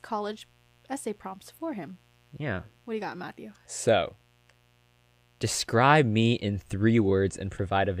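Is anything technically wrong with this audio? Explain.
Yes. Mains buzz runs throughout the speech, from start to finish. Sharp switching spikes from the 60 Hz supply leak into the signal twice per cycle, spreading harmonics up into the kilohertz range. It sits well below the voice as a steady, raspy buzz.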